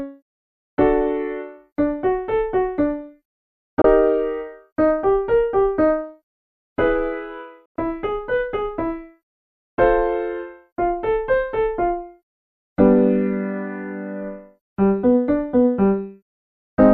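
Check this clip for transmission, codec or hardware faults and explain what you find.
Two short digital broadcast dropouts turn up. The first runs from 3.82 to 3.85 s and the second from 7.66 to 7.76 s. In both, the receiver stopped getting clean frames (lost sync or failed checksums) and muted until good data arrived. The sound fades to silence over about 3 ms and then comes back. The first gap is a quick tick of silence, consistent with one 24 ms frame. The second is a 96 ms hole, which fits roughly four frames. Whatever was broadcast during those gaps is gone.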